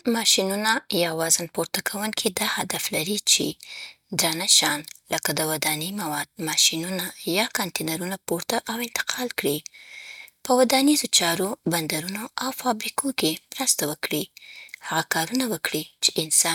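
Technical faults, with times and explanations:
Nothing stood out on listening to this speech recording.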